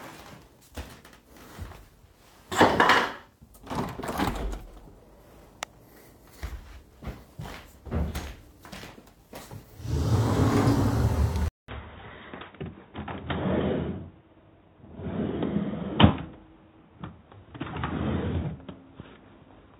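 At 11.48 s there's a 200 ms gap, then the sound goes dull and boxy through to the end, with nothing above 3.8 kHz, a small level shift and a new, quiet noise floor. The likely cause is the input switching to a poorer device.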